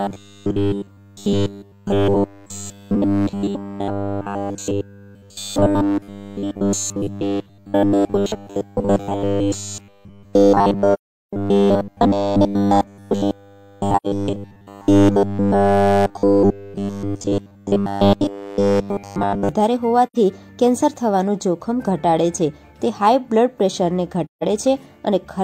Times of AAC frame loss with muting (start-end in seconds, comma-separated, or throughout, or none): 10.94-11.33, 13.97-14.06, 20.06-20.16, 24.25-24.43